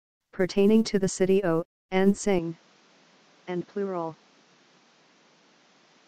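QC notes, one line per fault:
2.39 s to the end, input switched to a poorer device: with no gap, the sound suddenly dulls with nothing above 7.6 kHz, drops about 5 dB and gains a fresh noise floor roughly 30 dB down, likely from a jump to a weaker mic or headset.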